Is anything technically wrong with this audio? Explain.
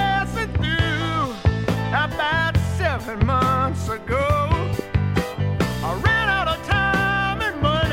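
Yes, there are two loud pops, at 1.45 to 1.47 s and 4.79 to 4.81 s, each a single sharp hit of about 20 ms. Each is likely a sudden voltage step or pulse, from a plug, switch, static or a driver glitch, that the circuits downstream then shaped. The sound continues underneath. The first rises about 10 dB above the signal, the second about 15 dB. On a waveform each appears as a tall, narrow spike; on a spectrogram, as a thin vertical stripe spanning the frequency range.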